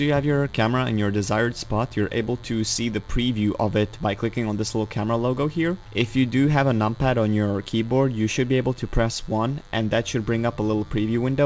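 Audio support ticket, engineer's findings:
DECT cordless phone buzz, throughout the clip. Steady, thin 100 Hz buzz with a dense harmonic series, roughly 30 dB below the audio. A nearby DECT handset or base transmits a burst every 10 ms. The audio front end rectifies it, producing a buzz at the burst rate. Call path bandlimited: no content above 8 kHz, consistent with wideband G.722 at 64 kbps. Suggested action: relocate the DECT base and check cable shielding.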